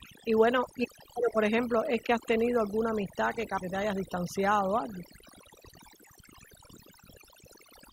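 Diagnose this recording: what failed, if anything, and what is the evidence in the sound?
Overdone noise removal runs through the whole speech clip, at the processing stage. The background sits near silent with twinkly specks. The suppressor is pulling individual frequency bands right down whenever they look like noise, taking quiet voice detail with them.

At 3.57 to 3.62 s, right after "tenido alguna amistad que", the sound jumps ahead with a small blip into "te hayas distanciado o". That's likely a stream segment skipped on the network side: one chunk never loaded, so the player carried on with the next.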